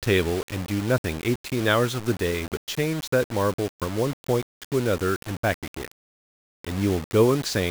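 From start to finish, the speech carries a coarse, grainy distortion that rises and falls with the voice. The grit clings to every syllable and changes character as the level moves. Quiet tails break up, sputtering or dropping out between steps. The likely cause is low bit depth without dither. The audio seems reduced to about 5 bits and simply rounded. That leaves error only about 15 dB below the signal, tied to the waveform.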